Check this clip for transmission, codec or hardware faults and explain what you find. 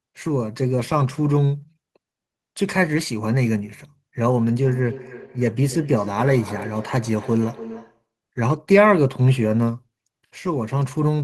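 One fault stands out: a feedback echo between two devices, from 4.64 s to 8.08 s. Each phrase returns roughly every 300 ms, thinner and ringing, peaking about 15 dB below the speech. A second device in the room is replaying the call, and this microphone picks it up again.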